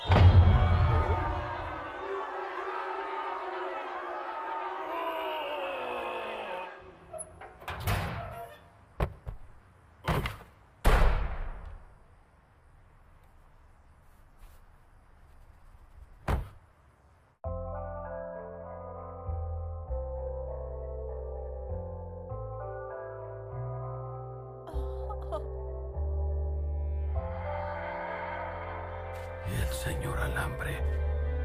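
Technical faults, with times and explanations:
The signal shows no audible technical faults at any point.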